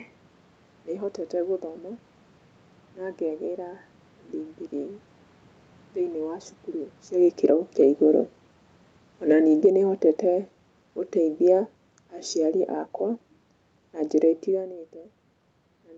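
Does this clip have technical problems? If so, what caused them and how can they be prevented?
Yes. Between 9.16 and 13.33 s an automatic gain falling fault pulls the level down by about 6 dB. The gain control judged the input too loud and eased its gain downward, so the speech and the room noise sink together. On the waveform the envelope and the noise floor taper in step, and on the spectrogram the whole band dims evenly. Giving the gain control more input headroom, or fixing its gain once the level is set, prevents this.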